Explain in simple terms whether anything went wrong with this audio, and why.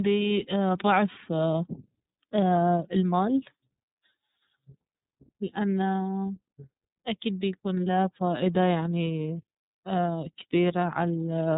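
The whole recording went through the iLBC codec, a phone-line voice squeezer: nothing above about 3.8 kHz survives, and it sounds slightly rough and synthetic throughout.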